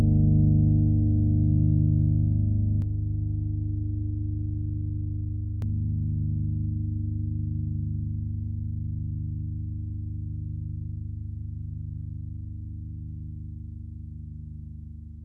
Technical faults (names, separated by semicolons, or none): channel delay (comb filtering)